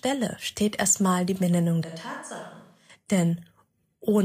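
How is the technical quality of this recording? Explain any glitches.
One glitch stands out in the speech. From 1.84 to 2.89 s the sound suddenly turns roomy and hollow, with thinner bass, a drop of about 10 dB, and background noise rising to roughly 30 dB below the speech. The likely cause is a switch to a distant microphone: the close mic's signal dropped out and a farther one, hearing more room, took over until it snapped back.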